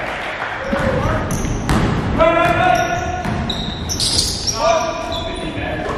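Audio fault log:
1.52 s and 4.61 s, block of digital silence. The sound cuts out and returns with no fade, once for about 0.73 ms and once for 1.45 ms, which fits blocks of 32 and 64 samples. Gaps this short are heard as a tick or dip rather than as silence.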